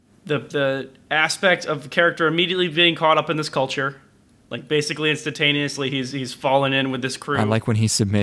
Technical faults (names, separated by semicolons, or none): none